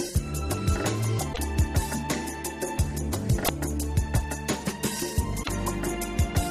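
Three short glitches break through the audio, at 1.29 to 1.39 s, 3.41 to 3.49 s and 5.40 to 5.49 s, each under a tenth of a second. They are damaged data in the compressed stream. Bytes in those stretches were lost or overwritten, so the decoder misreads or discards the affected frames, loses its sync, and has to hunt for the next valid frame header before clean sound resumes.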